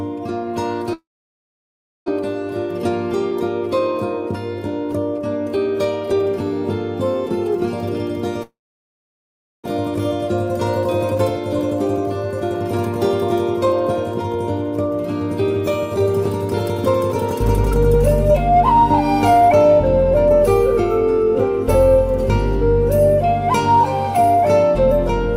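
A long network dropout at 0.93 to 2.10 s was likely caused by packets stopping altogether. The receiver stretches the last sound into a short fading buzz, then leaves about a second of silence, and the audio resumes with a full second missing.

Next comes a jitter buffer speed-up from 2.22 to 6.20 s. Delayed packets arriving together leave the buffer over-full, so the receiver trims tiny pitch-period slices, about a tenth of a second in all. The sound runs roughly 3% fast at unchanged pitch.

The same dropout returns at 8.43 to 9.68 s, with about 1.1 s of silence and another second lost.

A second speed-up follows from 11.15 to 19.56 s. It removes around a fifth of a second, holding a 2% faster pace.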